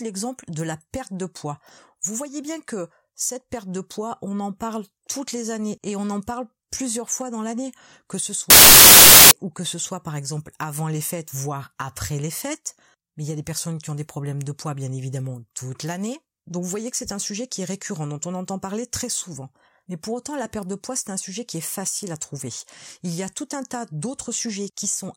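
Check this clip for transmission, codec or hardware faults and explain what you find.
There's one clear fault here, a short burst of samples built from the wrong bytes running from 8.50 to 9.31 s, so a bit under a second. For that stretch the reader is pairing up the bytes of each sample wrongly, so the busy low-order bits end up acting as the big part of every value. The speech is covered by loud, harsh noise, close to white on the louder sounds.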